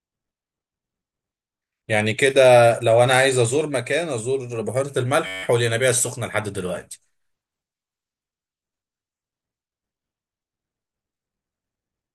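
Speech, with a system hang loop from 5.27 to 5.43 s. A 10.67 ms slice repeats exactly, 15 times, making a steady buzz at about 94 Hz. The driver stalled while the hardware kept replaying its ring buffer, which fits a 512-sample buffer.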